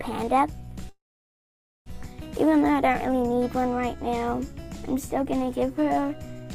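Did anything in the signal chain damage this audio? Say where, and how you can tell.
Yes, at the network stage: a call audio freeze at 0.89–1.88 s, a brief fade then silence, resuming where it stopped. Late packets likely emptied the jitter buffer.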